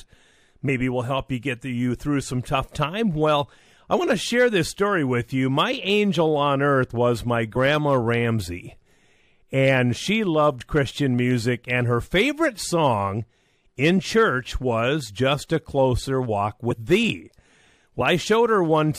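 Speech with compressed frames skipped at 0.68, 7.55, 16.70 to 16.73 and 18.00 s. Each time the decoder loses whole frames, so the audio jumps ahead by roughly 20, 50, 70 and 70 ms.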